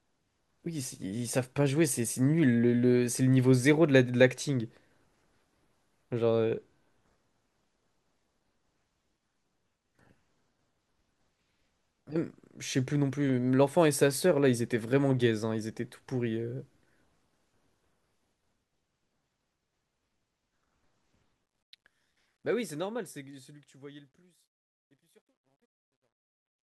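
From 21.46 s to the end at 26.69 s, the speech fades out, and the fade carries truncation distortion. The level drops smoothly, but the gain stage keeps too few bits and adds no dither. The grit fits a 12-bit path. As the signal sinks toward the smallest step, the waveform turns blocky. The tail grows rough and grainy. From 23.81 s to the end it is worst.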